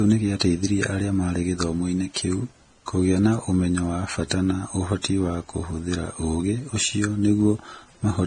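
Throughout, the speech was likely transcoded between lossy codecs, a low-bitrate Vorbis-like encode then MP3. This layers two sets of artefacts, with nothing above 9.7 kHz.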